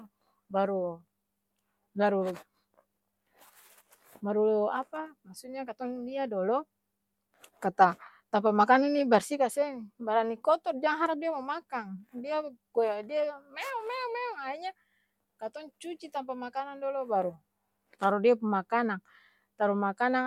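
No technical faults can be heard anywhere in the recording. The speech continues without interruption or audible change from its first moment to its last.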